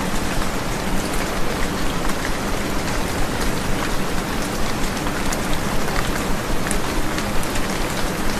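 At 3.39 s the audio jumps forward by about 200 ms, and it happens again at 6.08 s with a skip of about 150 ms. Those are compressed frames skipped: whole chunks of coded audio never reach the output, so playback leaps ahead, which fits a run of roughly ten and then seven frames of 21.3 ms.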